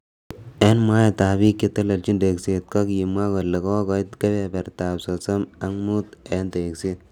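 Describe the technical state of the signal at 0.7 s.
Right around 0.7 s the signal carries microphone overload, from 0.61 to 0.68 s: the peaks run about 4 dB past the converter's limit and a few percent of samples are flattened, likely because the input volume was set too high. The result is a harsh crackle on the loudest sounds. At 0.63 s a microphone volume step-down follows, with everything, background included, dropping by about 4 dB at once, likely the call software cutting the input gain after detecting clipping. The overload distorts the peaks, while the step-down leaves the sound clean and only lowers its level.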